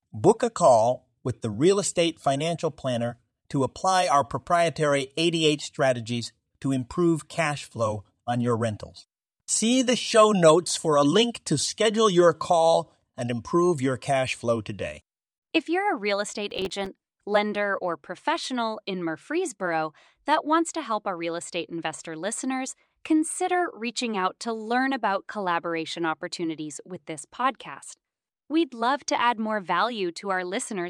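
From 16.51 to 16.86 s the speech breaks into processor overload crackle. The processor repeatedly misses its buffer deadlines, and roughly fifteen short dropouts, consistent with buffers of around 3 ms, fall silent with hard edges, producing a gritty tearing that stops once the load clears.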